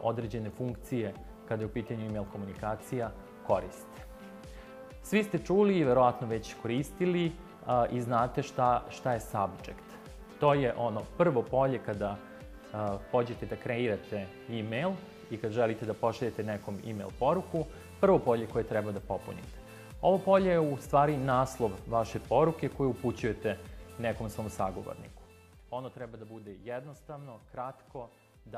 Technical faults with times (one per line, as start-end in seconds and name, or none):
none